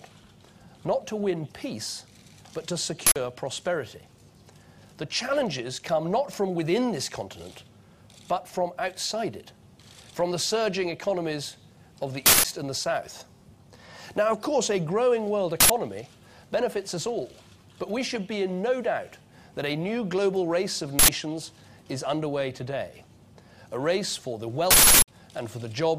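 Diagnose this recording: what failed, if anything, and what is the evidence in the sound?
An uninitialised buffer at the driver or buffer stage: loud digital-noise bursts at 3.07, 12.26, 15.60, 20.99 and 24.71 s, lasting 93, 186 or 372 ms, which fits whole 4096-sample blocks and multiples. Unlike a dropout, leftover memory fills the gap, not silence.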